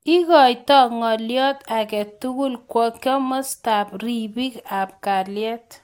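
No technical faults can be heard anywhere in the speech.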